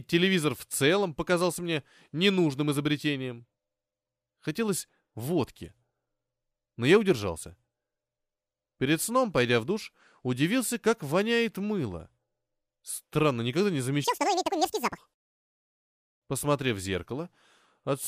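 At 14.04 to 14.98 s, just after "никогда не", the audio is read two samples at a time: the speech plays at double speed, an octave higher.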